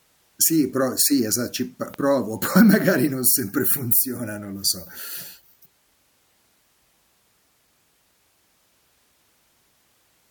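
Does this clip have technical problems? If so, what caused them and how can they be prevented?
Yes. A single loud pop sits at 1.94 to 1.96 s, just before "provo poi magari non", peaking a few decibels above the speech. It is likely a voltage pulse from a connector, switch, static discharge or driver glitch. The signal chain shaped it into one short thump. Unlike a dropout or buffer glitch, the speech carries on intact beneath it, with no gap or repeated fragment. Secure cables, ground equipment properly and avoid switching hardware while recording.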